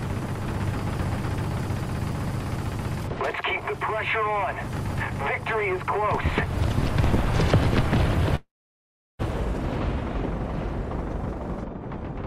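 The audio has a long network dropout from 8.35 s to 9.22 s. At 8.35 s the last sound is stretched into a fading buzz or hiss that decays quickly, leaving about 0.73 s of near-silence before the signal resumes at 9.22 s with roughly 0.84 s of material simply gone. This pattern is likely packet loss on the link, with the receiver's concealment briefly extending the final received sound before giving up and muting until fresh audio arrives.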